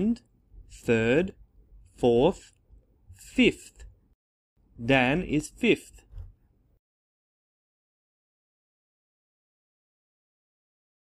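From 0.28 to 10.53 s, a click recurs every 1.02 s, likely clock drift buffer slips. Each shows as a thin vertical broadband line on the spectrogram.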